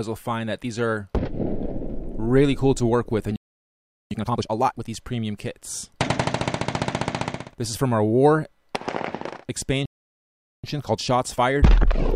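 At 3.36 s the sound drops out for about 0.75 s, a playback stall, most likely the player running short of buffered data or having its output thread blocked. A waveform shows a flat line, and a spectrogram shows an empty vertical band. The same stall recurs at 9.86 s for about 0.78 s.

From 4.11 to 4.85 s, time-compressed catch-up follows the first stall. The player clears its backlog at 2× speed by cutting out short pieces and cross-fading across the joins. This keeps the pitch level but sounds rushed, and a spectrogram shows compressed, choppy texture. After the second stall, a milder 1.1× catch-up runs from 10.64 s to the end.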